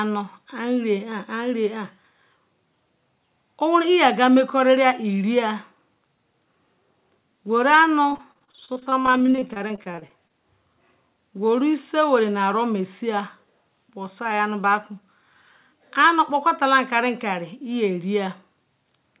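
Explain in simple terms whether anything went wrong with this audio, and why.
Something did go wrong, between about 8.1 and 10.3 seconds: repeated packet loss, the choppy, robotic sound. During those two seconds the call kept dropping small bits of audio, each gap at most about 32 ms, and the receiving end papered over each hole by stretching the last bit of sound it had. Nearly a third of that stretch is filled in this way, which gives the speech a choppy, stuttering quality, on top of the call codec's usual muffled sound with nothing above 4 kHz.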